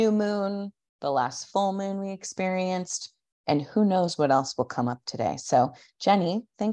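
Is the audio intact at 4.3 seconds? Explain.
Yes, at 4.3 s the speech plays through cleanly, with no dropout, click, distortion or other fault to be heard at that moment.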